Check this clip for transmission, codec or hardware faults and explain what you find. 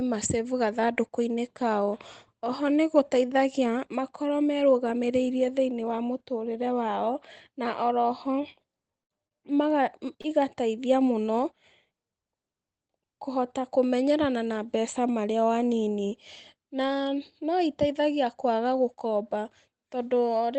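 Three faults are audible, all within about a second of each other in this speech clip, carried over a call codec whose top end stops around 8 kHz.

At 9.02 to 9.12 s there is a burst of packet loss. The last sound is held and fades out as the receiver stretches it to cover the gap, then jumps ahead with about 60 ms of speech gone.

At 9.27 to 9.34 s and again at 10.21 to 10.27 s there is a short stall from a late packet. A sound hangs slightly too long, by about 39 ms and then about 28 ms, because the jitter buffer ran dry and the last audio was extended until the delayed packet arrived. Nothing is lost.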